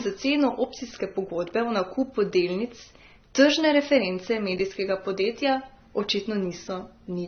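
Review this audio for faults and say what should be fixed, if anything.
Throughout, the speech sounds dull with nothing above 6.3 kHz, and two layers of codec artefacts are heard together. That's likely transcoding between lossy codecs. The sound points to a low-rate AAC-LC encode later re-encoded as HE-AAC, with the second encoder spending bits on the first one's damage while the lower cut-off stays. To prevent it, encode once, straight from the original or an uncompressed master.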